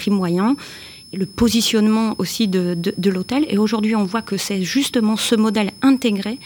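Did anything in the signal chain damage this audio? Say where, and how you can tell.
Yes, in the analogue stage: a switching supply whistle persists throughout, a faint tone wandering between 5.18 and 5.3 kHz, roughly 25 dB down; its drifting high pitch rules out steady mains hum.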